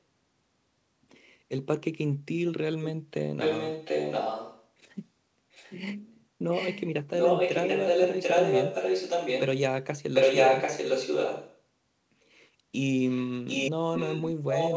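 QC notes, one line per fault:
3.39–4.69 s, 5.51–5.82 s, 6.51–6.84 s, 7.18–9.43 s, 10.13–11.62 s, 13.08 s to the end: echo leak, a copy of the speech trailing about 0.74 s behind, anywhere from faint to louder than the original, likely a speakerphone's echo canceller letting its own playback through.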